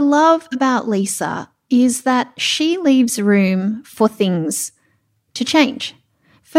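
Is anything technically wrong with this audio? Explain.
No, nothing stood out as technically wrong on listening to this speech clip.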